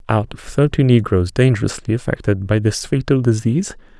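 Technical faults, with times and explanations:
No technical faults can be heard in the speech recording, and the signal stays continuous and stable throughout.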